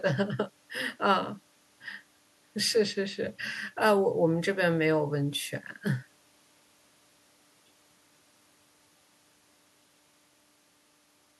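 No technical fault can be heard anywhere in the speech recording, with the signal holding steady and intact across its whole duration.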